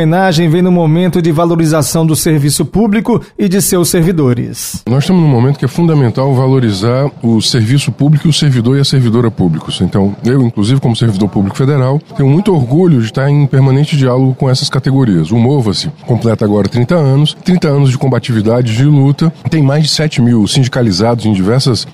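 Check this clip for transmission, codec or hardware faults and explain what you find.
There's one fault: a gap between stream segments at 16.40 s. Two segments' time stamps don't quite meet, with segments running about 6 s, so the player fills an 11 ms hole with silence. You hear a brief hard-edged dropout, though no audio is actually lost.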